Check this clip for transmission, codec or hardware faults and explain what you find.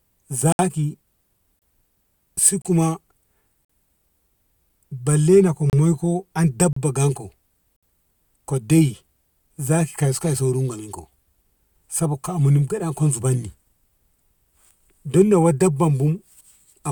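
The speech has one fault, a gap between stream segments, repeating about once a second at 0.52, 1.59, 2.62, 3.65, 4.70, 5.70, 6.73 and 7.76 s. The one at 4.70 s falls just before "balle no ko moiko". Timestamps of consecutive one-second segments leave small gaps that the player fills with silence. Each gap is a hard-edged dropout lasting 3 to 68 ms. On a waveform it appears as a flat line, and on a spectrogram as a clean vertical blank stripe.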